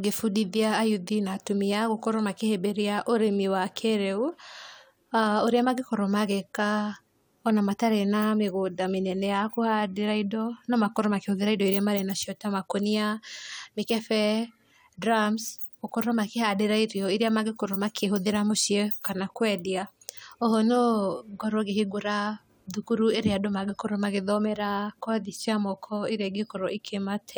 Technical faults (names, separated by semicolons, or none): none